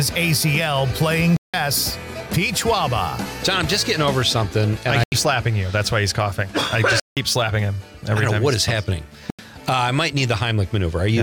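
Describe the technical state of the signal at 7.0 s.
At 7.0 s the signal drops into a block of digital silence lasting about 170 ms, from 7.00 to 7.17 s, a length that fits an 8192-sample buffer the program likely failed to fill in time. The audio stops dead and resumes with no fade around a short hole. On a waveform it is a flat line of silence; on a spectrogram, a fully blank vertical band.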